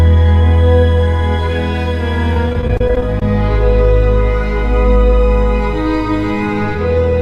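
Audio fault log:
2.33 to 3.22 s, repeated packet loss (robotic sound): the music keeps dropping out in short holes, each patched by stretching the last bit, so it turns choppy with pieces missing.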